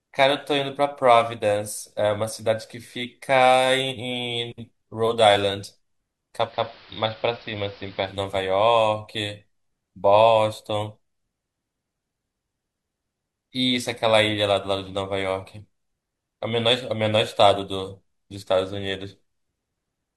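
Digital radio blending to analogue from 6.42 to 8.20 s: the receiver lost its digital stream and cross-faded over 150 ms to the station's AM broadcast, so the speech drops about 1 dB and gains a hiss roughly 25 dB down.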